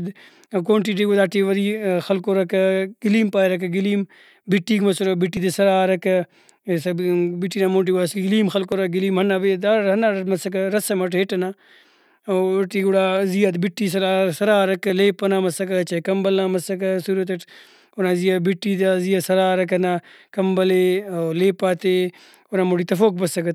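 Speech with a small skip-ahead at 5.37 s after "پاریرکہ گلیم بٹیک مسرہ", at 8.72 s and at 14.9 s, likely a dropped buffer (overrun) losing a few milliseconds each time. The two sides join directly, with no silent gap as an underrun would leave.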